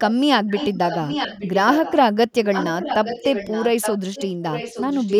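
From 0.47 to 1.94 s, 2.33 to 4.32 s and 4.52 to 5.17 s, the speech carries an echo leak: a delayed copy trailing the direct signal by about 0.87 s, sitting roughly 10 dB below it. The likely cause is a far end playing the call over a loudspeaker whose echo canceller failed to suppress what its microphone picked up, so that residue was returned down the line as a lagging repeat.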